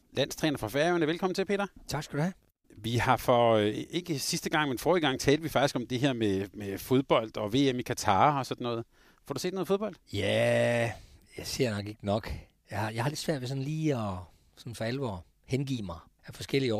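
Nothing goes wrong at any point in the recording; the speech runs along with no dropouts, glitches or other audible faults to point to.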